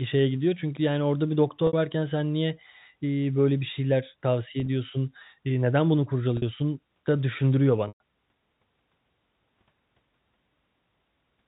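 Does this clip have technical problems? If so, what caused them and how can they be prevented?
Yes. Packet loss with pitch repetition occurs at 1.67–1.73 s, 4.60–4.68 s (scattered), 6.37–6.42 s and 7.88–8.00 s. At each gap the receiver loops the last pitch period, giving a brief buzzy hold. The 120 ms gap at 7.88 s fades toward silence. On a waveform these show as identical repeating cycles that shrink in amplitude. On a spectrogram they appear as frozen harmonic stripes. A larger jitter buffer, forward error correction or a more reliable network path would prevent it. The G.711 telephone coding caps the band at 4 kHz, as expected for that format.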